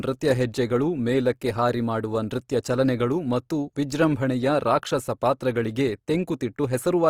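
Opus compression runs throughout the speech. The sound is plainly rough and grainy: when bits run short, bands are refilled from folded lower content or noise rather than left empty. This likely comes from the music-mode coder at a low rate, fitting roughly 24 kbps. Bandwidth still extends to 20.3 kHz.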